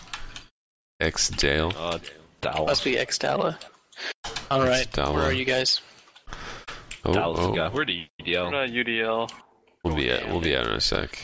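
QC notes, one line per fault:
No faults detected.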